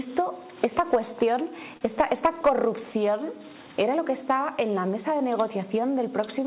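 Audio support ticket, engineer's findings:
Clock drift between sender and receiver: sender's audio clock runs slow, by about 3 percent, relative to receiver. Jitter buffer keeps draining, so the receiver must keep padding the stream. Audible throughout as small, unevenly spaced timing hiccups, tempo slightly unsteady.

Repeated timing corrections, 0.07 to 6.41 s: receiver repeatedly stretches short pieces to stay in step with the slow sender, all in the same direction. Net playback about 98 percent speed, roughly 150 ms added overall. Heard as faint hiccups, sound dragging slightly.

Short stall from a late packet, 1.77 to 1.83 s: packet arrived late, jitter buffer ran empty, and the receiver held the last sound for 38 ms until it arrived. Nothing lost, delay up 38 ms. Heard as a briefly held sound with slight buzz or dip, over a G.711 mu-law call path with nothing above 4 kHz.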